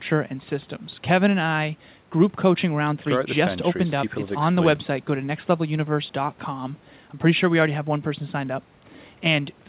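No faults are present in the speech, whose band stops at 4 kHz as expected for a call path through a 64 kbps G.711 mu-law codec.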